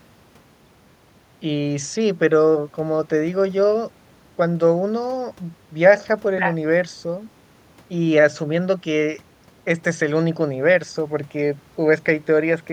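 No technical faults are audible.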